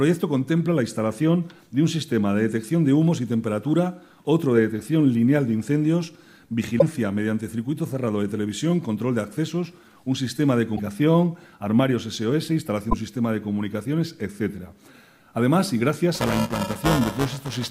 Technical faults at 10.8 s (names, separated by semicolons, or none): broken MP3 bit reservoir